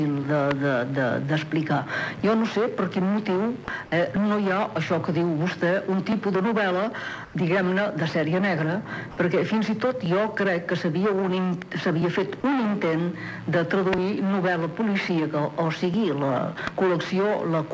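A click or pop recurs every 1.96 s while there is signal, from 0.24 s through to the end of the clip. These are likely clock drift buffer slips. The two devices' clocks disagree by several hundred parts per million, so the buffer between them gradually drifts until a short block of samples, on the order of 70, is dropped or repeated. That splice gives the regular tick. At 3.65 to 3.68 s, and again at 9.11 to 9.17 s, the sound briefly gives way to a flat, steady hiss for 30 ms and then 60 ms before returning. Both gaps lose part of the sound itself, about 20 ms and 30 ms. This is likely sound dropped by the voice detector: the sender judged that material to be background, stopped sending, and the receiver filled the gap with comfort noise until the detector fired again. Around 7.25 to 7.34 s the real background, which sits about 22 dB below the loud parts, is swapped for 90 ms of smooth, featureless noise roughly 6 dB quieter. 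That is comfort noise in place of the background, which suggests discontinuous transmission paused during a quiet stretch. The audio also passed through a WebRTC call path using G.722, so nothing is present above 8 kHz.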